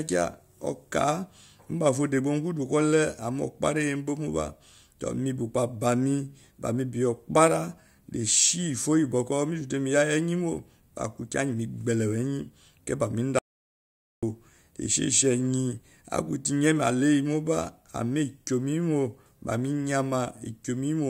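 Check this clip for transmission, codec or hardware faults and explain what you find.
There's one fault here, an audio dropout to silence from 13.39 to 14.23 s. The speech cuts off mid-flow into about 0.84 s of silence, with no room tone at all, then resumes. The likely cause is a lost input or brief mute while recording continued writing silence.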